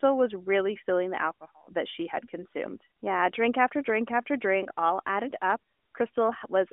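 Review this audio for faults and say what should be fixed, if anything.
Nothing stood out on listening to this speech recording, so there is nothing here that needs fixing.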